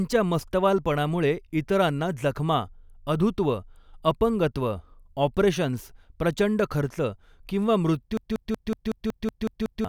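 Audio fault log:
8.17–9.85 s, system hang loop: a machine-gun stutter as one 186 ms slice of speech repeats nine times at 5.4 Hz, the hardware replaying a stalled buffer (fitting 8192 samples) while the system froze, losing about one and a half seconds.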